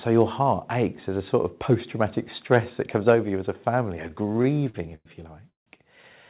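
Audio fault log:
1.02 s and 3.15 s, microphone volume stepped down: the level drops suddenly, by about 1 dB just after "your heart" and about 2 dB after "that comes". It likely comes from the call software lowering the microphone input in single steps after judging it too hot.
2.53–2.58 s, microphone overload: the loudest peaks flatten against the converter's limit, about 2 dB over, with roughly 2% of samples cut. This likely comes from too much input gain, and it gives that moment a harsh, crackly edge.
4.08–5.07 s, repeated stalls (stutter): after "as a family a", the sound catches 14 times. About 273 ms is stretched in, roughly a quarter of the span, with the longest hold at 102 ms. Packets arrived late, so the jitter buffer kept emptying and the receiver held the last sound.
5.49–5.68 s, call audio freeze: the sound hangs for about 171 ms, fading to silence for 150 ms of it, then resumes where it stopped with nothing lost. 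It likely comes from packets held up in transit until the jitter buffer ran dry.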